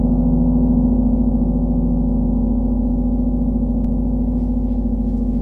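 At 3.85 s there is a DC step. The zero line of the waveform suddenly shifts, by about -28 dBFS. The sound itself carries on unchanged. What you hear is a single low thump at the moment of the jump. The offset does not hold. It drains away as a 5 Hz high-pass filter pulls the signal back towards zero, so the baseline settles again. The converter or input stage has shifted its reference level.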